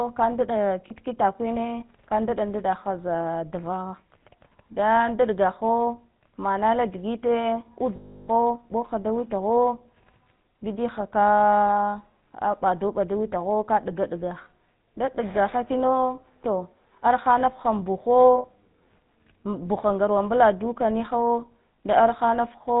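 Speech here, pushed through the GSM full-rate codec the whole way, and you can hear it plainly: the voice has that buzzy, gravelly edge from the pulse-driven vocal-tract model, and nothing comes through above 4 kHz, which fits the old 13 kbps full-rate coder. There are also lost GSM frames at 0.88–0.91 s (just before "hine ka ndɗa ndɗa"), 18.38–18.46 s and 21.76–21.78 s, each a brief rough, metallic hold where the decoder reuses the last good frame. The big one is 7.96–8.29 s, between "manala digite" and "ɓohha da", where the sound rings on in a rough, metallic hold for about a third of a second.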